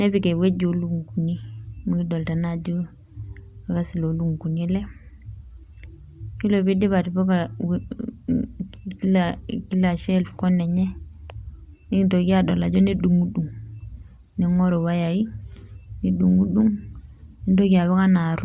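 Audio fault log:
No fault is present in this speech clip.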